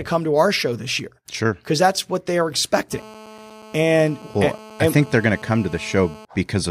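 A hard, raspy buzz cuts in at 2.92 s and holds steady until 6.25 s, sitting about 21 dB below the speech and unrelated to it. Its fundamental is 216.7 Hz, topped by a dense stack of harmonics. This is GSM phone buzz: a nearby 2G handset transmitting in regular bursts, here evenly as during a call, while the audio circuitry rectifies each radio pulse into an audible click, 217 times a second.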